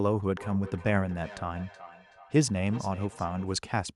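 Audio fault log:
0.37–3.57 s, feedback echo between two devices. The speech returns roughly every 0.4 s, thinner and more ringing with each pass, peaking at about 18 dB below the direct sound. A second device in the room replays this microphone's signal, which this device's echo canceller cannot remove, since it only cancels what its own device plays.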